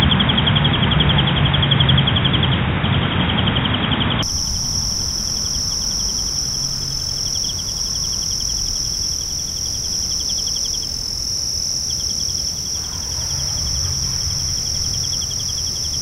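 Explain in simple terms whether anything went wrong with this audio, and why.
Until 4.23 s the sound is dull and boxy, missing everything above 3.8 kHz. Then it clears. Likely cause: input switched to a poorer device.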